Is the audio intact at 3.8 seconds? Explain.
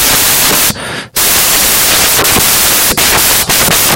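No. At 3.8 seconds the speech is still buried under samples built from the wrong bytes, a fault that runs through the whole clip. Each sample's bytes are assembled misaligned or in swapped order, so the rapidly changing low bits take over the value, producing loud, harsh broadband noise, close to white on loud sounds.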